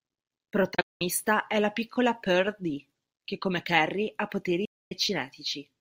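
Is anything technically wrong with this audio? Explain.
Yes, this speech has two digital broadcast dropouts. The receiver lost or rejected frames and muted with 8 ms fades: broken holes at 0.74–1.02 s before "è la piccola" (longest 192 ms), then a solid 256 ms gap at 4.65 s.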